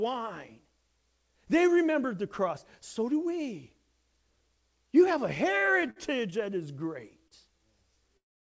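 Speech heard through a call path with nothing above 8 kHz, which fits a G.722 codec. From 5.6 to 6.39 s, between "have a" and "that is", there are repeated stalls (stutter). The sound catches six times, holding for about 137 ms in total, up to 56 ms at once. Late packets kept draining the jitter buffer. From 7.28 to 7.33 s, just after "that is", comes a short stall from a late packet. One sound is held for 33 ms until the packet arrives. From 8.17 s to the end there is a call audio freeze. The last sound is held for 379 ms and falls silent for 360 ms of it, likely because packets were held up and the jitter buffer ran empty.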